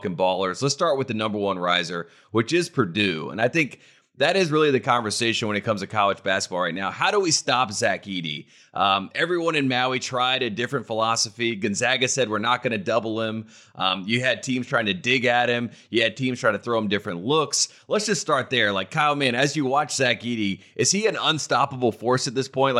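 No technical fault can be heard anywhere in this speech recording. There is no point in it that needs a timestamp or an explanation.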